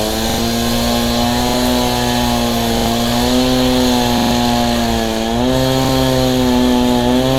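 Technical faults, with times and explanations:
0.30 to 5.89 s, repeated buffer: five short stutters, at 0.30 to 0.38 s, 1.49 s, 2.77 to 2.86 s, 4.18 to 4.31 s and 5.85 s. Each time, new audio missed its deadline, so the output replayed its last block of about 43 ms, which fits a 2048-sample buffer. It replayed that block one to three extra times, with a hard join at every repeat. This produces a brief mechanical stammer in the sound, and the replays stand in for roughly 40 to 150 ms of audio that is never heard.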